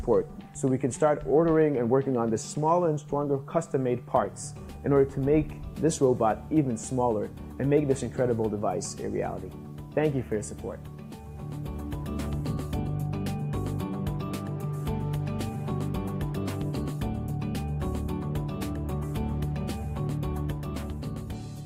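Nothing is technically wrong with this audio; there are no faults to time or trace to a cause.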